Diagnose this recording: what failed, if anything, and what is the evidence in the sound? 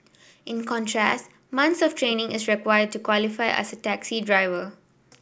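Nothing failed; no stage shows a fault.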